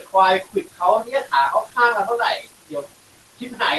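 Throughout the clip, the noise suppressor is pulling down whatever bands it judges to be steady background by about 17 dB, frame by frame. These noise suppressor artifacts make the room noise, which sits about 16 dB under the speech, dip in the gaps and swell back beneath the speech.

The suppressor also mistakes parts of the speech for noise. Speech is cut by the noise suppressor at 0.00–0.14 s, 0.43–0.81 s, 1.04–1.33 s and 1.64–1.77 s, each time by about 16 to 17 dB, then at 2.38–2.47 s by about 11 dB and at 3.39–3.61 s by about 13 dB. Those stretches come out swallowed and faint, with soft edges dropping away alongside the background.

All of this rides over the call codec's coding grain and a top end that stops near 12 kHz.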